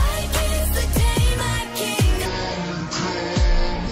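From 2.26 s to the end, a section at the wrong speed: the playback clock for this stretch was likely running at half the rate it was recorded at, so the audio plays at 0.5 times its proper speed. Speed and pitch drop together at that point. Everything from 2.26 s onward is stretched out to twice its length and lowered by around ten semitones, giving a sudden deep, slowed, dragging quality where the sound had been at its normal pace.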